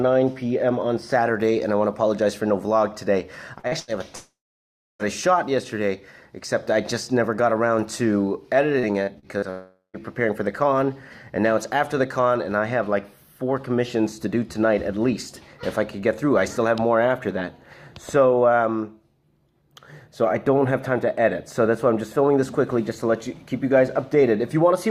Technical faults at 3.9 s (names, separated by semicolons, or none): burst of packet loss